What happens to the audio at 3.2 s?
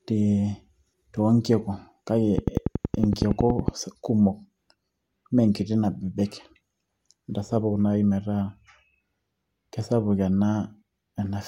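At 3.2 s the speech sits inside a train of clicks running from 2.38 to 3.69 s. Sharp, evenly spaced pulses arrive about 10.8 times per second, around fifteen in all. Each has much the same shape and peaks roughly 15 dB above the speech. They are heard as a steady ticking laid over the sound. The likely source is interference from nearby equipment or a faulty connection or power supply.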